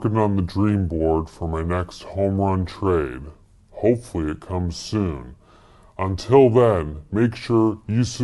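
Throughout the clip the speech runs at a wrong sample rate: it plays back at about 0.73 times its proper speed and roughly 5.5 semitones low, with speed and pitch dropping together. That fits 44.1 kHz material played at 32 kHz without conversion.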